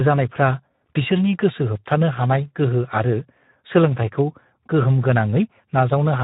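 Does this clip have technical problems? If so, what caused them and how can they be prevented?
Yes. Throughout the speech there is plainly audible Speex codec damage: a hoarse, buzzy, noise-laden texture that fits a setting near 11 kbps. This CELP coder has too few bits to model the excitation. Unlike the warbling, swirly artefacts of MP3 or AAC, the roughness sits in the voice itself and does not smear. To prevent it, record or transmit with a modern codec such as Opus, or at least a higher Speex quality setting.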